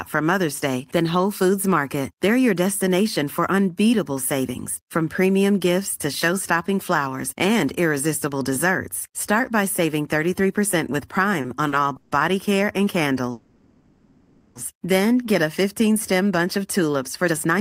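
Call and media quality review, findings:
Call audio freeze at 11.96–12.14 s and 13.31–14.58 s. Sound stalls, then continues as a fading buzz for 150 ms and 1.24 s. Likely late packets draining the jitter buffer. Playback resumes where it stopped. Nothing lost, delay grows.

Jitter buffer speed-up, 17.29 s to end. Sound runs at 156% speed, pitch unchanged, hurried. Buffer over target after a delay build-up. Short pitch-period slices cut repeatedly, about a fifth of a second removed.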